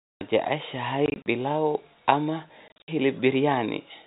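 From 1.06 to 1.26 s, just before "pilau ama", and again from 2.68 to 2.88 s, right after "pilau ama", packet loss filled with silence chops the speech into hard-edged gaps. Each gap is a multiple of 20 ms, which fits 20 ms packets. The dead silence, rather than smeared repeats, rules out concealment.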